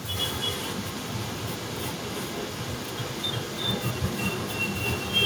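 From 0.15 s to the end, a second copy of the speech trails the original by about 0.34 s, at roughly the same loudness, so the two overlap and compete. This is an echo leak, likely from a far end on a loudspeaker whose echo canceller let its microphone's pickup return down the line. Unlike room reverberation, which smears into a fading tail, this is one distinct repeat at a fixed delay.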